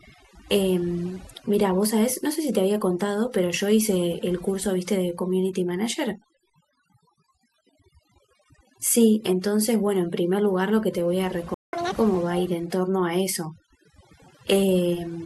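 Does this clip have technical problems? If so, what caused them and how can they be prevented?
Yes. Overdone noise removal runs through the whole speech clip. A noise reducer set far too aggressively cuts individual frequency bands whenever they sit near its noise estimate. The background drops and breaks up into twinkling specks, and the voice loses its quieter parts. Prevent it by using gentler reduction settings and checking the result by ear.

A playback stall occurs from 11.54 to 11.73 s, a silent gap of about 190 ms in the middle of the speech. The player was likely starved of data or had its audio thread blocked, then resumed once it recovered. Prevent it with a larger playback buffer and a dedicated, high-priority audio thread.

Catch-up at higher speed follows from 11.73 to 11.92 s. The player resamples its backlog at double speed to win back the lost time, so the voice briefly jumps about ten semitones higher and rushes before dropping back to normal. 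Prevent it by recovering latency gradually with small rate adjustments.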